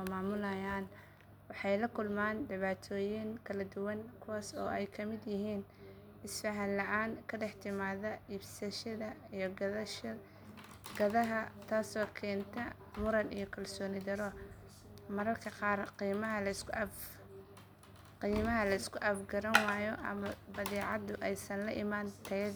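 Speech recording; no technical faults audible anywhere in the clip.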